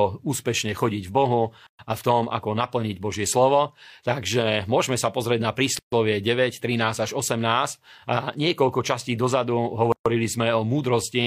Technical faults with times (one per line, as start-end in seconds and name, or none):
1.67-1.79 gap at a join of encoded pieces
5.79-5.92 gap at a join of encoded pieces
9.92-10.06 gap at a join of encoded pieces